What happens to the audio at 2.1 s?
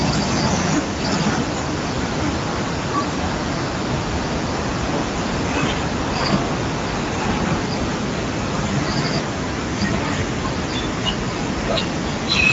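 At 2.1 s the speech carries the same Speex codec damage heard across the whole clip. It is not a separate event. Speex is a CELP coder that rebuilds each frame from a vocal-tract filter and a coded excitation. Here the excitation is plainly coarse, so the speech sounds hoarse and noisy. The band stops near 7.7 kHz, and the damage points to a wideband mode of roughly 16.8 kbps.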